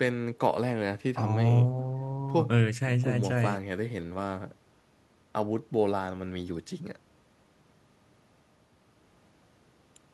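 A speech recording with nothing technically wrong with it.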